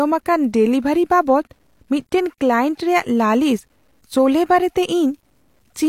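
Low bit depth without dither runs throughout the speech: a grainy, signal-following distortion roughens quiet passages and decaying syllable tails, sitting roughly 50 dB below the speech. This likely comes from undithered truncation to a coarse word length, which fits about 10 bits.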